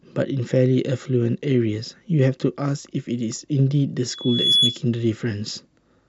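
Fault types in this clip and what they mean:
Loudspeaker feedback squeal: a steady 3.4 kHz whistle swells over roughly 0.4 s from 4.10 s and tops out somewhat louder than the speech before stopping at 4.81 s. A microphone picked up its own loudspeaker, and the loop gain exceeded one at that pitch.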